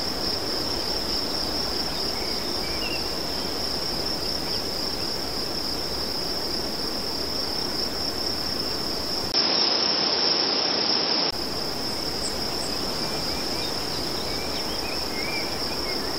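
At 3.72 s the stream likely lost a few dropped samples, well under a millisecond of audio, so the waveform leaps straight from one value to a later one with nothing in between. That gap is far too brief to take away any of the sound. What it leaves is a single sharp click, with a thin vertical line running up the whole spectrum at that instant.

From 9.32 s to 11.33 s the input likely switched to a poorer device, a lesser microphone or a headset running its call profile. At the switch there is a short silence of about 20 ms. After it the sound passes a narrower band and turns dull and boxy. The level shifts by about 5 dB, and a new noise floor about 30 dB below the signal sits under it until the original input returns.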